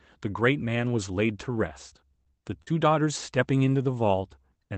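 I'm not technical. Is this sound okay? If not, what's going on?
No. Three tiny pieces of the speech went missing on their way through the call, at 1.89 to 1.93 s, 2.23 to 2.30 s, and 2.62 to 2.69 s. This is short concealed packet loss. The receiving end patched each hole by stretching the sound just before it, so you hear a brief smear or wobble rather than silence or a click. The last patch covers about 40 ms, twice the others, and the second one also drops a short sliver of sound.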